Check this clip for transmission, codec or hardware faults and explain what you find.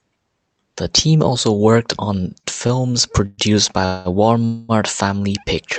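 Two kinds of fault are audible in this speech, both from late delivery across the call link. The sound passes through what is likely an Opus call codec, with content reaching about 8 kHz.

Short stalls from a late packet occur at 2.39 to 2.46 s, just after "team also worked on", and at 2.67 to 2.83 s. A packet arrived late. The jitter buffer ran dry. The receiver held the last sound for about 39 ms, then about 17 ms. Each time a sound drags slightly, with a faint buzz or dip. Nothing is lost. The speech resumes where it stopped.

Call audio freezes follow at 3.26 to 3.41 s, 3.86 to 4.08 s and 4.45 to 4.72 s. The likely cause is packets held up in transit, emptying the buffer. The receiver filled the gaps with a fading buzz or hiss of about 120, 194 and 235 ms. None drops to silence. Each freeze inserts a pause, and the speech then continues intact.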